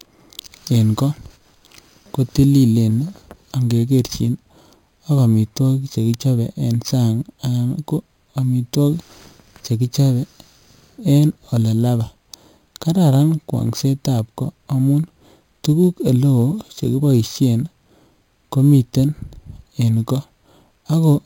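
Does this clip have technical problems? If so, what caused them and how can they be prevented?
Yes. Throughout the clip there is imaging from sample-and-hold upsampling. The speech was raised to a higher rate by repeating each sample with no smoothing filter, which points to an 11 kHz source brought up to 48 kHz. This leaves mirrored copies of the spectrum between about 5.5 and 11 kHz, roughly 24 dB below the speech. They are heard as a metallic fizz that rises and falls with the voice. To prevent it, upsample with a proper interpolating low-pass filter rather than repeating samples.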